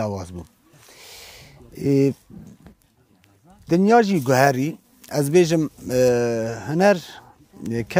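Pre-emphasis left on from 4.09 to 6.09 s: a CD-style 50/15 µs treble boost was never de-emphasised, leaving highs about 8 dB hot at 10 kHz, thin, bright and sibilant.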